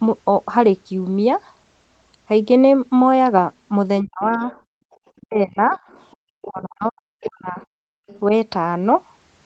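A speech recording from a speakerphone call, where the echo canceller likely failed to remove all the loudspeaker signal: the other side's voice leaking through comes in faintly, around 25 to 30 dB below the talker, at 3.99–5.19 s, 5.88–6.86 s and 7.59–8.2 s. When both sides talked at once, the canceller likely could not separate them, so speech suppressed in double talk dips the talker by up to about 40 dB at 4.02–4.42 s, 5.2–5.79 s and 6.46–7.6 s. The canceller also clamped the microphone while the loudspeaker played, and this background gating drops the room sound by about 36 to 39 dB for roughly a fifth of a second at 4.7–4.91 s and 7.88–8.07 s. The call's 8 kHz audio bandwidth is consistent with Opus at around 24 kbps.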